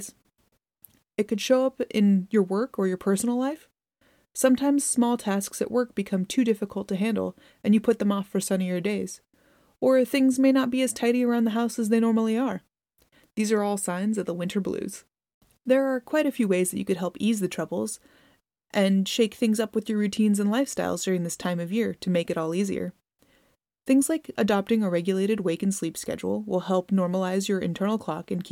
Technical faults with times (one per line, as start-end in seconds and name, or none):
none